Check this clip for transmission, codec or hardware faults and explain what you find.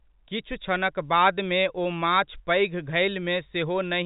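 No faults are audible anywhere in this speech recording.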